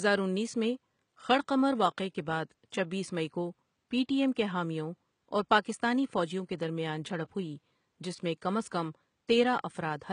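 Throughout the speech, the codec damage is plainly audible. The likely cause is HE-AAC compression, fitting about 20 kbps. Treble is copied up from lower bands, so harmonics misalign and s sounds turn gritty, metallic or lispy. Room noise sits about 51 dB below the speech.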